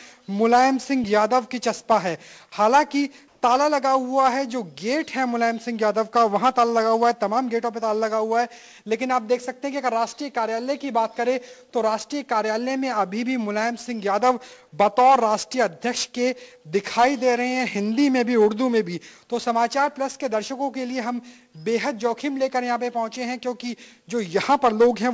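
From 3.28 to 3.42 s, a 140 ms stretch of background is replaced by comfort noise: a steady, featureless hiss with the fine detail of the real background gone, sitting about 1 dB off the surrounding level. The likely cause is discontinuous transmission, where the sender paused audio during what its detector judged silence (the background here sits about 41 dB below the loud parts) and the receiver synthesised shaped noise to fill the gap. The audio passed through a call path with nothing above 8 kHz, which fits G.722 at 64 kbps.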